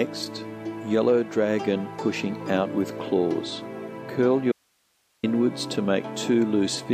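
A likely break in the signal feed, with everything downstream still live, causes an audio dropout to a faint residue from 4.52 s to 5.23 s. For about 0.71 s the sound cuts out abruptly mid-flow and only a low hiss remains, roughly 45 dB below the normal level. At 5.23 s the audio snaps straight back in, with no fade on either side, so the gap reads as a hard interruption rather than a natural pause.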